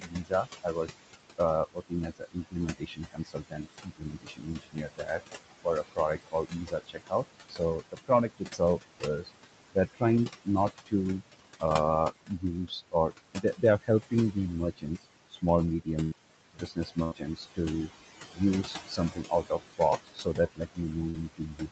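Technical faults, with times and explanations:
Throughout, noise suppressor artifacts: steady background is pulled down by about 20 dB between phrases, so the leftover noise pumps under the speech.
0.00–15.88 s, 16.54–17.59 s and 18.32–21.72 s, speech cut by the noise suppressor: soft consonants and word endings are mistaken for noise and dropped by up to about 22 dB, sounding swallowed. This totals roughly five seconds in the first stretch and about half a second in the second.
16.03–16.17 s and 17.03–17.15 s, burst of packet loss: about 80 ms of audio never arrived each time. The receiver continued the last sound and faded it out, then resumed further on with that part missing.
21.10–21.17 s, short concealed packet loss: about 40 ms went missing and was patched from the preceding sound, leaving a brief smear before the real audio returns.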